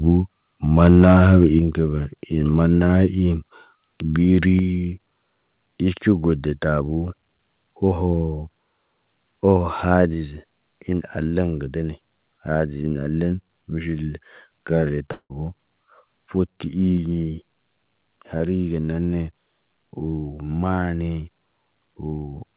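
A harsh, crackling edge rides on the loudest syllables of this speech recording from 0.83 to 1.45 s, where the tops of the waveform are flattened by microphone overload. The peaks are driven about 4 dB past the converter's ceiling, so a few percent of the samples in that stretch were pinned at the converter's limit. The likely cause is an input volume set too high. Right after that distorted burst, at 1.59 s, the whole level drops abruptly by about 4 dB, voice and background together. The same one-step fall happens again at 4.59 s (about 3 dB), 10.14 s (about 3 dB) and 16.98 s (about 2 dB). This is the microphone volume stepped down, likely by the call software finding the microphone too loud and lowering the device's input gain in discrete steps. From 15.12 to 15.32 s there is a long network dropout of about 180 ms, which likely comes from a gap in packet delivery. It sounds like a smear that stretches the last sound for roughly 176 ms, fading into silence before the speech resumes further on, with that stretch of audio simply gone. 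At 18.38 to 18.42 s, just before "ge neene", a brief 20 ms smear marks a short concealed packet loss. The receiver likely covered the missing slice by extending the preceding sound and blending back into the real signal. Throughout, the audio has no content above 4 kHz, which fits a narrowband telephone-style codec on the call path.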